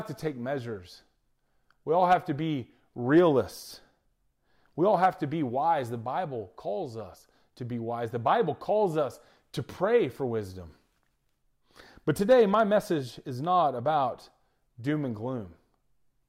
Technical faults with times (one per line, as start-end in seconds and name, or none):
none